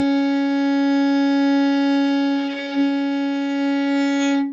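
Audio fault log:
There is no fault in this audio.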